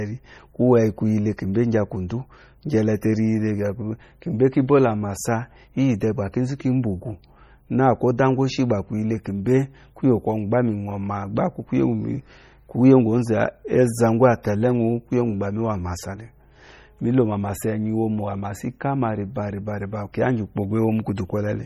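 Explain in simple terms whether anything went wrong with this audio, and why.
Two problems can be heard. Throughout the speech, the sound has a watery, swirling quality, with metallic chirps on s sounds and blurred consonant starts. This is likely MP3 compression applied heavily: the encoder had too little data to work with, so it discarded quieter parts of the sound, and those parts flicker in and out from moment to moment, which is what creates the swirl.

At 3.01 s there is pre-echo: a short hiss, about 11 ms long, arrives just before a sharp attack, and the attack itself sounds softened. It happens because the compression spreads its noise across a short block of audio. The noise that was sized for the loud attack also lands in the quiet instant before it.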